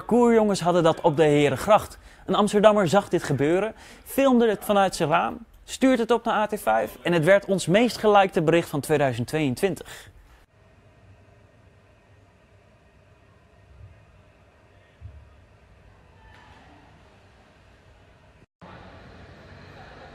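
Listening through the whole recording, nothing stood out as a technical problem at any point.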